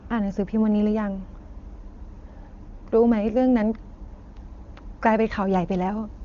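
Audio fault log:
Nothing to log here: the speech rides the AMR wideband HD Voice path without any faults turning up.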